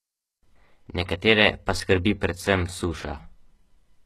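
HE-AAC compression runs throughout the speech, with nothing above about 12.3 kHz and clearly audible damage. The treble sounds gritty and lispy on s sounds, likely because it was rebuilt by copying lower bands upward, which fits a low bitrate near 16 kbps.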